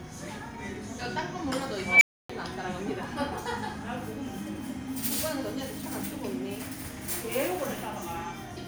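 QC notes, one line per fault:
1.78 to 2.30 s, unstable filter: a recursive filter in the chain has gone unstable, so its feedback keeps multiplying the signal instead of letting it decay. A squealing tone around 2 kHz rises out of the sound and swells over about 235 ms until it slams into clipping. The internal values then overflow, and the output drops to silence for about 284 ms while the filter state resets, leaving a loud beep followed by an abrupt gap.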